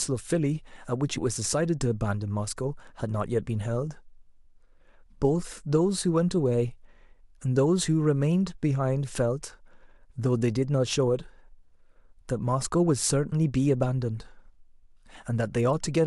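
Nothing in the speech stood out as a technical problem on listening.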